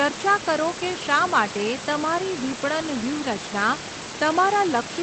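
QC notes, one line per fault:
No faults are heard in this speech clip. Room noise sits about 12 dB below the speech, and the audio stops near 8 kHz, which fits a call codec such as Opus at a modest bitrate.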